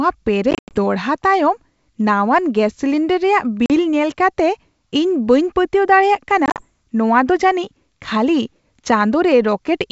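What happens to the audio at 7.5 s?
Nothing goes wrong at 7.5 s: the speech carries on intact through that moment, with the wideband G.722 telephone coding at 64 kbit/s leaving no more than faint traces of its own.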